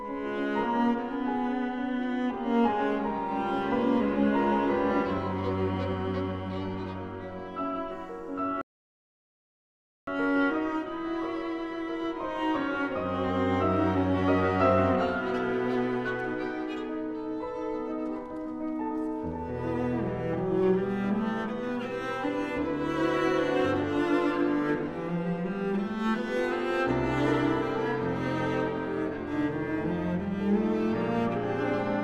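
At 8.61 s the audio drops to silence for about 1.46 s, a rebuffering stall: playback drained its buffer and halted until more data arrived. At 10.07 s the sound resumes exactly where it stopped, nothing skipped, with the gap simply added.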